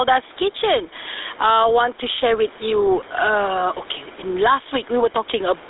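The speech runs the whole way through the GSM full-rate codec, and the damage is plainly audible: a buzzy, gravelly roughness that comes from rebuilding the voice out of a vocal-tract model fed with a sparse, regularly spaced pulse train. The band is held to a narrow telephone line of roughly 300 Hz to 3.7 kHz. On a spectrogram everything above about 3.8 kHz is empty, and the harmonics below look smeared and grainy. The roughness fits a bitrate of around 13 kbps. The level also shows gain pumping throughout, with a swing of roughly 10 dB, so loud and soft passages sit unnaturally close and the sound feels squashed. The likely cause is input gain set far too high, with a fast limiter or compressor clamping down on each peak. On the waveform, the peaks look flattened to a near-constant ceiling.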